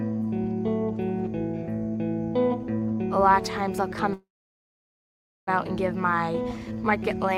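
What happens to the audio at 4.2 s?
A call audio freeze runs from 4.13 to 5.49 s, likely from packets stalling in transit until the jitter buffer emptied. The last sound trails off as a short fading buzz or hiss, then falls silent for about 1.2 s. The audio resumes where it stopped, nothing lost, but 1.34 s late.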